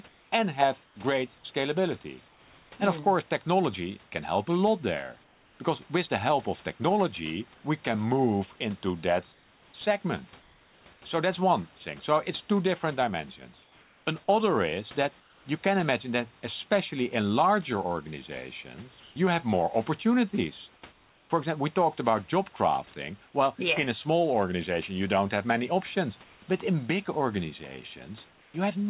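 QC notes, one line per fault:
0.84–2.72 s, 19.0–21.3 s and 26.24–28.54 s, comfort noise in place of the background: in each pause the real room noise gives way to a flat, featureless hiss for about 560, 540 and 440 ms. That's likely discontinuous transmission, with the receiver filling silence with synthetic noise.
5.24–15.46 s, sound chopped by the voice detector: the detector likely keeps flipping between sending and muting, so quiet edges drop out, about 2.1 s in total. The room noise sits about 30 dB under the speech. Nothing comes through above 4 kHz.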